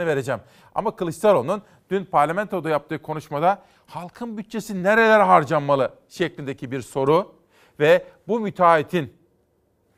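No technical faults can be heard anywhere in the recording, so the speech signal stays continuous and intact throughout.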